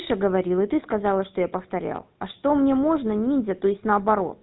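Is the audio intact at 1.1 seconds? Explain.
No. GSM full-rate codec damage runs throughout: regular-pulse excitation gives the speech a buzzy, gravelly roughness, consistent with 13 kbps coding, with nothing above 3.9 kHz.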